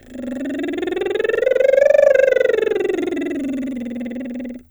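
No technical faults can be heard anywhere in this music clip.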